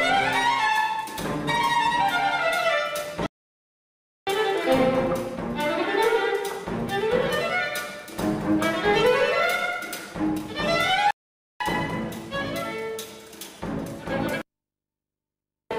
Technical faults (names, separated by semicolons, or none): playback stall